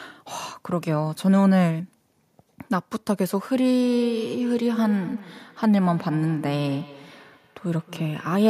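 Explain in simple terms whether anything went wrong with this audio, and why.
From 3.82 s to the end there's feedback echo between two devices: a nearby device replays the speech, and every phrase returns roughly a fifth of a second later, thinner each time.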